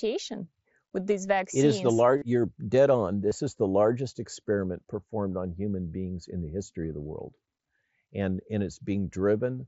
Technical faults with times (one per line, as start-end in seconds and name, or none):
2.18-2.22 concealed Bluetooth headset packet loss
3.29-3.31 concealed Bluetooth headset packet loss